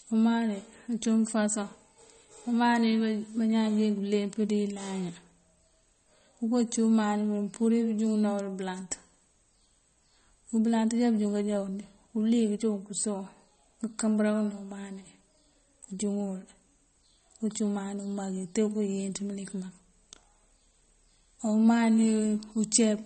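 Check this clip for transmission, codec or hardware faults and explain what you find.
There is one fault, present throughout the clip. The speech has a hard treble ceiling: nothing is heard above 8.4 kHz. The damage is plainly audible, with a watery, swirling texture. The likely cause is MP3 compression at a low rate, which fits around 32 kbps. Short of bits, the encoder cuts everything above a fixed frequency. It also drops weak frequency lines, which flicker on and off between frames. That flicker makes s sounds chirp, and attacks smear, blurring consonant onsets.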